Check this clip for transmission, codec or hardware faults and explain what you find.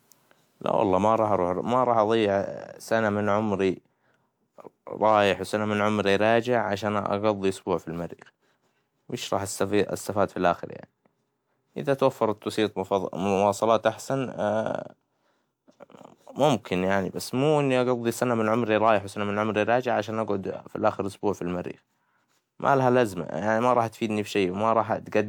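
One fault stands out, a brief stretch of hard clipping in this speech.

From 5.06 to 5.18 s, a faint crackle and slight harshness sits on the loudest moments, a roughening of the peaks rather than a sustained fuzz. The signal there runs about 1 dB beyond what one stage in the chain can pass, so the tops of the waveform are sheared flat. Those flattened peaks generate extra high harmonics, which is where the brittle edge comes from.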